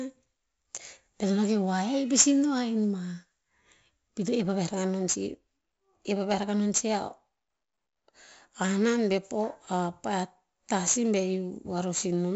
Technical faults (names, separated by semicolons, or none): 4-bit ADPCM compression